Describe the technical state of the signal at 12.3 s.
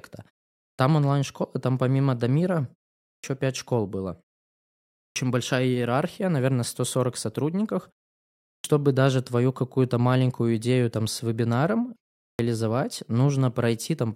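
At 12.3 s the speech suffers a clipped start after a pause. After 0.32 s of silence, the output device appears to have gone idle and needed time to wake and lock again. The first 141 ms, from 12.25 to 12.39 s, is swallowed, so the speech begins abruptly without its onset. Unlike a dropout, which punches a hole into sound already playing, this loss sits only at the head of sound emerging from silence.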